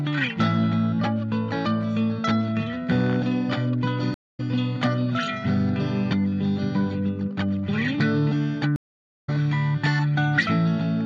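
A recording of sounds breaks twice with a stream reconnect, at 4.14 to 4.40 s, with 230 ms of silence, and at 8.76 to 9.30 s, with 504 ms. Each time the link dropped and a fresh decoder started mid-stream, so the sound resumes about 0.2 s and then half a second further on, beginning muted or fading in. Unlike a simple dropout, where the sound picks up where it stopped, here material is skipped.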